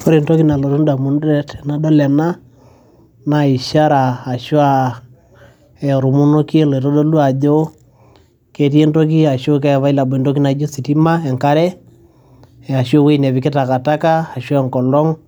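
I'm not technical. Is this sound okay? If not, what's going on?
Yes, this sound is okay; nothing is wrong with it.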